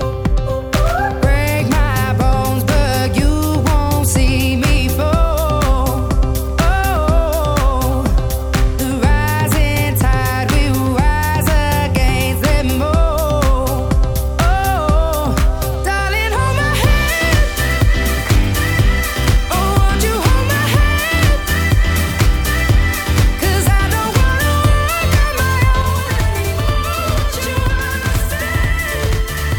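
From 25.82 s to the end at 29.59 s, one channel runs late by about 93 ms, which fits a 4096-sample buffer, and the two are summed to mono. This channel delay (doubling) makes every sound repeat as an equal-level slap echo.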